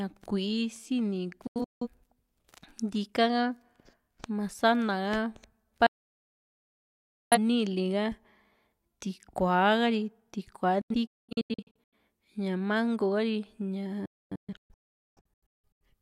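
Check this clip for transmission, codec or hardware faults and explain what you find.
The speech has four digital broadcast dropouts, at 1.47–1.87 s, 5.86–7.38 s, 10.81–11.93 s and 14.06–15.81 s. The receiver discarded bad frames and muted with 3 ms fades. The sound vanishes in scattered holes, or in one solid 1.45 s gap at 5.86 s, and shows as empty blocks on the waveform and spectrogram.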